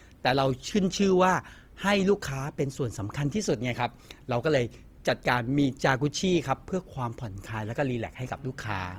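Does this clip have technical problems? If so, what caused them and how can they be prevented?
Yes. Throughout the speech the sound is plainly grainy and rough, with noisy band-filling rather than MP3's swirling spectral holes, and it still extends to about 20.2 kHz. This is likely Opus compression in music mode, which fits a low bitrate near 24 kbps. Encoding at a higher Opus bitrate prevents it.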